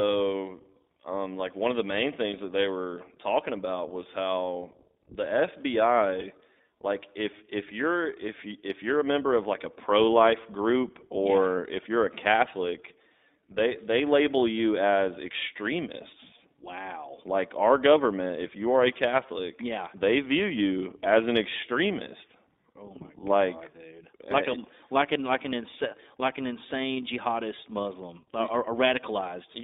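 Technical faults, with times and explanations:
throughout iLBC codec: The sound is held to a narrow band of roughly 250 Hz to 3.7 kHz, with a plainly audible rough, synthetic edge. Each 20 ms frame is coded on its own. That edge, rather than muffling alone, separates it from simple band-limiting, and fits the 15.2 kbps mode.
18.28 s lost iLBC frames: A 20 ms gap, consistent with one lost frame, is bridged by repeating the last pitch cycle mixed with noise, giving a brief buzzy, held vowel. Because the frames stand alone, the sound recovers immediately, without the smeared aftermath of inter-frame codecs.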